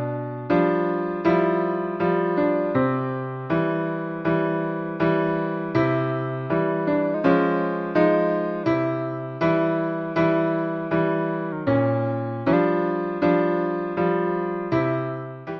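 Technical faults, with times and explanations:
7.14–8.64 s and 11.52–12.53 s, drift correction step: the audio first runs 5.88% fast and about a semitone sharp, then 5.88% slow and about a semitone flat. Speed and pitch shift together, unlike pitch-only detuning; likely clock-matching software re-centring its buffer.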